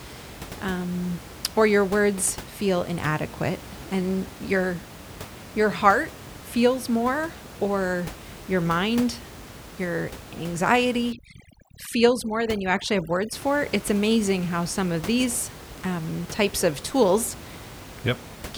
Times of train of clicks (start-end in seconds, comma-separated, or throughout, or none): none